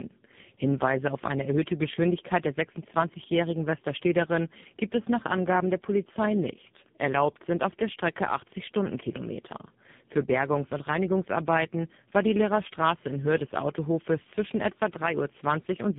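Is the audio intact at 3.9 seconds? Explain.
No. At 3.9 seconds the speech carries tandem speech coding, which runs through the whole clip. The sound points to a GSM full-rate coder followed, after a G.711 A-law link, by AMR-NB at around 6.7 kbit/s, so the second coder re-encodes the first one's already damaged output. Errors compound: the speech is rougher, more muffled and more warbly than one codec would leave it, and nothing remains above 3.7 kHz.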